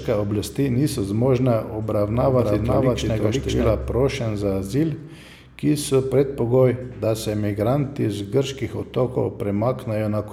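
A doubled audio track runs from 2.14 s to 3.70 s, ending just before "prošenj za azil". Here the speech is heard twice: a second, full-band copy trails the original by about half a second at roughly equal loudness, so every syllable returns as a clean, dry repeat with no room tail. The copy cuts in and out abruptly at both edges. The likely cause is the signal being captured again through a slower path and mixed back in.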